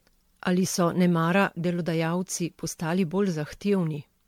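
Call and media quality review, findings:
Generation loss, throughout the speech. Swirly, smeared, hollow texture; blurred consonant attacks. Likely cause: repeated MP3 decode/re-encode, around ten passes, in a 96 kbit/s chain. Each pass requantises on a shifted frame grid, stacking noise and spectral holes. Distinguished from a single low-bitrate encode: degradation exceeds what that bitrate alone would produce.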